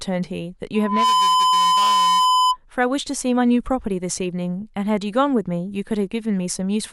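A microphone picking up its own loudspeaker closes a loop, causing loudspeaker feedback squeal from 0.74 to 2.57 s: a 1 kHz tone swells within about a third of a second to sit roughly 5 dB above the speech.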